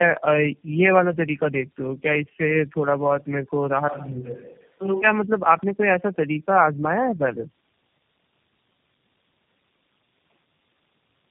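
Throughout the speech there is tandem speech coding: the signal was decoded and re-encoded at several network borders, so each low-rate coder worked on the previous one's degraded output. The combined damage fits a chain of about four speech codecs, ending in something like G.729A. Nothing is present above 3.3 kHz, which makes the speech muffled, and the stacked coding adds a rough, gritty texture and a warbling instability worse than any single codec would produce.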